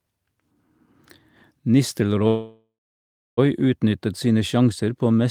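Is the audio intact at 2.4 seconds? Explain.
No. 2.4 s falls inside a call audio freeze from 2.27 to 3.39 s. The speech stalls into a fading buzz, then about 0.65 s of silence, likely from an emptied jitter buffer. It resumes where it stopped, with nothing lost, just 1.1 s late.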